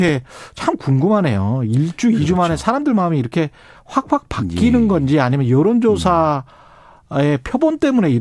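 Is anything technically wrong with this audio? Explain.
No, nothing technically wrong can be heard in this speech recording, and the signal stays intact and consistent all the way through.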